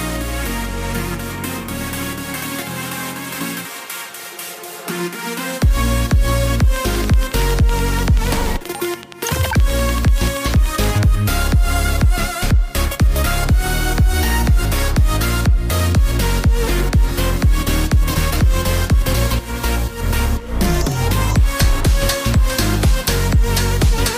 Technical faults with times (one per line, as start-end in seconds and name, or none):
6.76-10.85 train of clicks